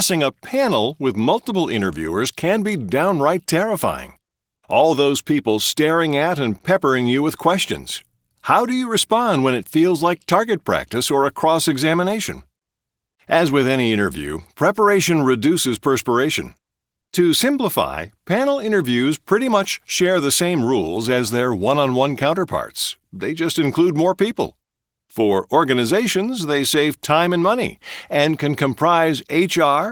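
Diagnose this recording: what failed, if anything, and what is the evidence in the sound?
Nothing failed at any stage here; the speech comes through with no dropouts, clicks, distortion or timing faults to point at.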